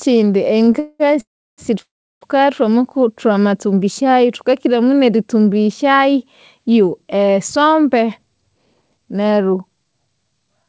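Speech heard over a call path whose band stops at 8 kHz, consistent with G.722, shows a short stall from a late packet at 0.65 to 0.70 s: about 17 ms of sound is held too long, then resumes from the same place. Three call audio freezes follow, at 0.80 to 1.03 s, 1.21 to 1.61 s and 1.82 to 2.24 s, lasting 200, 372 and 396 ms. Unlike the brief stall, each buzz fades into silence, which spans about a third of a second in the last two, likely from packets delayed in transit. From 8.00 to 10.65 s a jitter buffer speed-up runs the speech at 112% while keeping its pitch. Roughly a third of a second is trimmed away, so it sounds hurried rather than higher.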